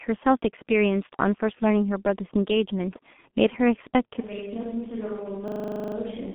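G.723.1 codec damage runs through the whole clip. The speech is held between about 150 Hz and 3.5 kHz, with nothing above 3.8 kHz, and the coarse 30 ms frame coding leaves it muffled, hoarse and smeared at the consonants, which fits a rate near 6 kbit/s.

From 4.21 s to the end, the sound turns abruptly roomy and hollow, thinner in the bass and roughly 10 dB quieter, with room noise rising to about 25 dB below the speech. This points to a switch to a distant microphone, likely after the close microphone's signal dropped out.

A system hang loop follows from 5.48 s to 5.96 s. A single 40 ms slice of audio repeats exactly twelve times, giving a rattling stutter at 25 Hz while the sound hardware keeps replaying its stalled buffer. The speech then picks up with little or nothing missing.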